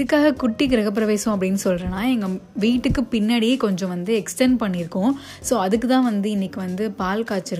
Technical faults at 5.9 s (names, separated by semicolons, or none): none